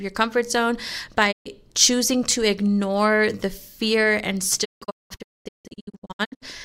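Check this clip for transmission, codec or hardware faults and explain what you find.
Two digital broadcast dropouts break up this speech. From 1.31 to 1.48 s the receiver stops getting valid frames and mutes, with a 20 ms fade into a clean 128 ms hole. From 4.64 to 6.47 s it mutes again in scattered holes totalling about 1.25 s, the longest lasting 224 ms. The material lost in these gaps never comes back. Each hole is dead silence rather than hiss or a garbled signal, which sets it apart from an analogue fade.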